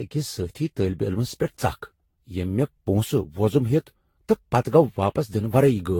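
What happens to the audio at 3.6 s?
At 3.6 s the speech carries generation loss, present across the whole clip: a swirly, hollow, smeared quality with softened attacks, likely from around ten successive lossy re-encodes at roughly 70 kbit/s. A spectrogram shows nothing above 19.2 kHz.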